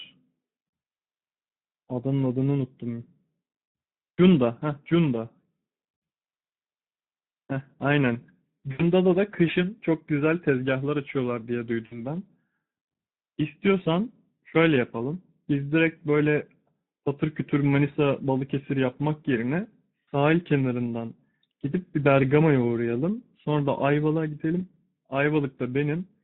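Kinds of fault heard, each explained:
Speex codec: The whole speech clip passes through Speex at a low rate, which fits about 11 kbps. Too few bits reach the excitation, so the voice sounds plainly hoarse and noisy.
VoIP packet loss concealed by the speech codec: Three gaps are patched by the decoder, at 8.71 to 8.84 s, 11.85 to 12.03 s, and about 20.06 s. It stretches the last pitch and filter into a fading buzzy tone or coloured noise. Each gap leaves the voice weak for a moment after.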